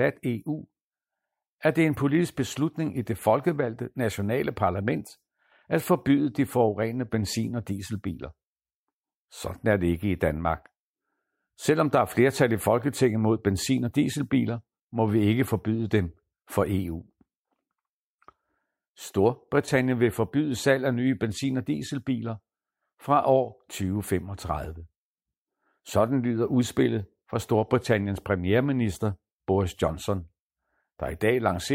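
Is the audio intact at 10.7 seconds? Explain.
Yes, the speech at 10.7 seconds is intact, with no dropout, click, distortion or other fault at that moment.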